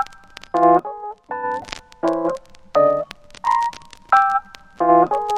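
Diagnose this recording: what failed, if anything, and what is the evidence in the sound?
Sudden gain jump at 0.79 s: the level drops by about 9 dB in a single step and returns at 1.62 s, with the background noise falling and rising together with the sound. This is likely a digital gain setting in the driver or processing stage applied without a ramp.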